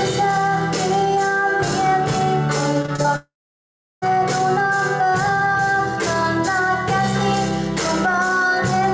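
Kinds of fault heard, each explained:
Repeated packet loss (robotic sound): between 2.82 and 3.06 s, four short holes, none over about 21 ms, get patched by repeating sound, giving a choppy stutter.
Long network dropout: from 3.16 to 4.04 s the sound smears into a fading buzz, then goes silent for roughly 0.7 s, likely audio that never arrived.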